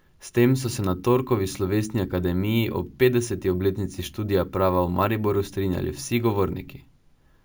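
It's a speech clip with imaging from sample-and-hold upsampling running the whole way through. There's a bright, metallic fizz sitting above the voice, rising and falling with it, and the first mirrored band lands between 8 and 16 kHz, about 22 dB under the speech itself. That points to 16 kHz material pushed up to 48 kHz by just repeating samples with no smoothing filter, so the spectrum got folded back up as images.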